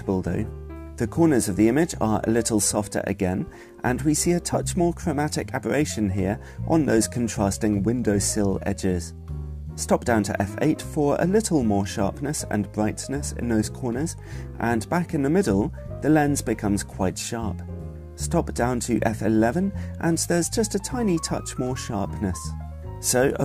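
From start to finish the audio carries crude rate conversion: it was raised from 32 kHz to 48 kHz by simply repeating the nearest sample, with no interpolation filter. At this 3:2 ratio the stepping error recurs every three output samples, folding shifted, inharmonic copies of the sound roughly 20 dB below it. The result is a gritty fizz that rides on loud and high-pitched passages. Unlike codec artefacts, it doesn't swirl or smear in time.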